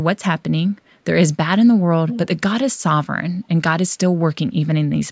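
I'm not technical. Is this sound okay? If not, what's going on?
No. Briefly, from 2.08 to 2.19 s, there's an echo leak. The likely cause is a call on a loudspeaker whose echo canceller let some of its own pickup slip back. You hear a short, quieter copy of the speech trailing about 0.43 s behind.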